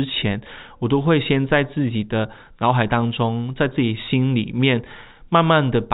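At 3.01 s, packet loss with pitch repetition: a 10 ms gap, likely one dropped packet, filled by repeating the last pitch period. It sounds briefly held and buzzy, and shows as frozen, evenly repeated harmonics on a spectrogram.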